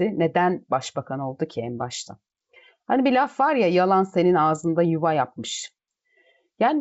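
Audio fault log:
No fault to log for this speech.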